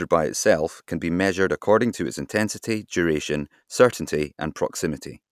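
Nothing stood out on listening to this speech recording.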